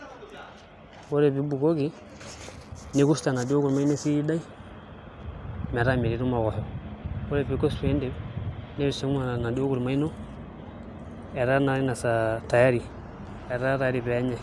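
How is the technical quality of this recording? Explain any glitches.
No glitches or technical faults are audible anywhere here.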